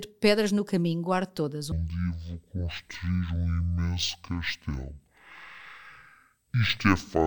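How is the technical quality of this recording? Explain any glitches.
The recording has one serious glitch: from 1.72 s, right after "no caminho guardo todas", to the end of the clip, the audio is stereo read as mono. The playback system treated interleaved left and right samples as consecutive samples of a single channel, stretching each moment over twice as many samples. The speech therefore runs at 0.5× speed and drops a full octave, 12 semitones, with a faint mirrored copy in the upper half of the spectrum, through to "dizer mas depois no".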